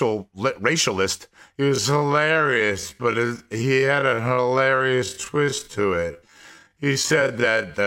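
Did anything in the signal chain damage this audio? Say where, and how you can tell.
Yes. A time-stretched section, likely from editing software, slows the speech to half speed from 1.57 to 7.73 s, starting at "the black people were," dragging at unchanged pitch.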